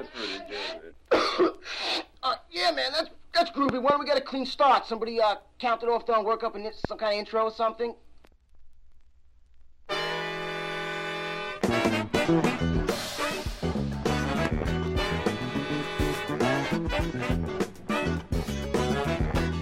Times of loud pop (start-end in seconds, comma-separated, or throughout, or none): 3.69-3.92, 6.85-6.87, 14.45-14.64